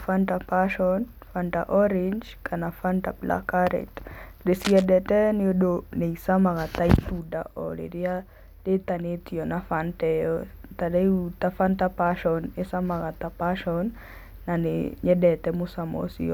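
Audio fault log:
4.55 to 4.86 s, cable scratch noise: a worn cable, connector or control is likely being moved, so its contact resistance jumps about rapidly. Across roughly 0.3 s this lays a dense, uneven burst of crackle over the speech, somewhat below the level of the talking, heard as a short scratching rustle that stops just before "nĩ ũndũ nĩ ĩcamaga".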